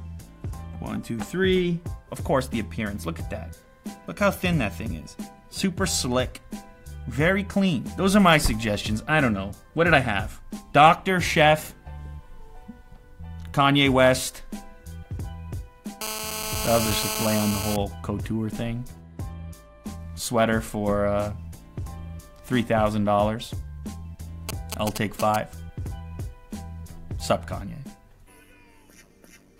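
From 16.01 to 17.76 s, GSM phone buzz: a nearby 2G phone in a call pulses at 217 Hz, rectified into a steady, raspy, harmonic-rich buzz about 5 dB below the signal. From 24.49 to 25.36 s come GSM signalling bursts at roughly the same level. These are short 217 Hz buzzes in a galloping dit-dit-dit rather than one continuous tone, as a phone sends brief radio bursts before a call or text arrives.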